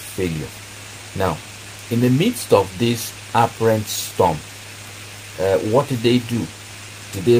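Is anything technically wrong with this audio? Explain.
No, nothing technically wrong can be heard here.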